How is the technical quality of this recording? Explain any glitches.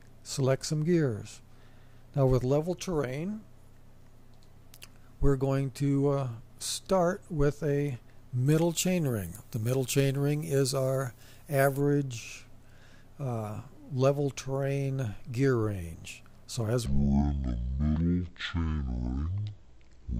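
Two faults affect the recording: a stretch with excess treble and a section at the wrong speed at the end.

Pre-emphasis left on, 8.46 to 11.80 s: the high frequencies were boosted along a 50 µs FM curve and the matching de-emphasis was never applied, leaving 10 kHz about 11 dB above 1 kHz. The sound turns thin, bright and sibilant.

Section at the wrong speed, 16.86 s to the end: this part runs at 0.503 times its original speed, likely because it was played back against the wrong clock. Pitch and tempo drop together by roughly ten semitones, so the sound becomes deep and dragging.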